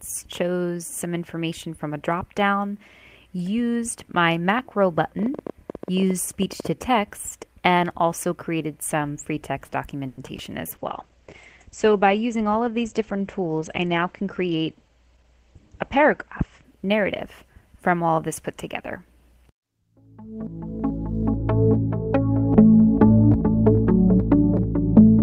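From 5.19 to 6.66 s a train of clicks ticks across the sound, about 12 per second at an uneven pace, roughly twenty in all, peaking around 5 dB above the signal. Each appears as a thin vertical stripe on a spectrogram and a sharp spike in the waveform. The likely source is electrical interference or a faulty connection or power supply.

At 10.07 s a call audio freeze lasts about 0.12 s. The last sound is stretched into a fading buzz for 100 ms, and then the audio resumes where it stopped, so nothing is lost but everything after it is delayed by 100 ms. The likely cause is packets held up in transit until the jitter buffer ran dry. A spectrogram shows a smeared, horizontally streaked patch.

From 10.37 to 10.40 s comes a short concealed packet loss. About 30 ms never arrived. The receiver filled 10 ms by extending the preceding sound and dropped 20 ms outright, which is heard as a brief smear or wobble. 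A waveform shows a tiny discontinuity where the fill blends back.

Starting at 10.75 s and lasting until 18.16 s, a call bitrate drop takes the Opus encoder from 32 kbps down to 11 kbps, holding the lowest rate for about 5.5 s. The bandwidth narrows from 20 kHz to 8 kHz, so the sound turns muffled and watery, and the spectrogram's upper region goes abruptly empty above 8 kHz.

Inside that stretch, from 13.85 to 14.96 s, a jitter buffer speed-up plays the audio at 109% speed with the pitch unchanged, trimming roughly a tenth of a second of pitch-period pieces to reduce the delay. It sounds hurried. The waveform shows compressed periods, and spectrogram features sit closer together in time.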